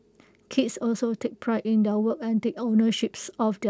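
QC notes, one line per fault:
No faults heard in this speech recording.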